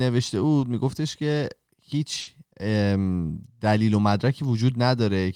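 At 0.59 s there's a short concealed packet loss: 20 ms never arrived, so the receiver stretched the previous sound over the hole, leaving a quick smear. Then at 2.21 s a burst of packet loss takes out about 60 ms; the last sound gets held and faded, and playback resumes past the missing chunk.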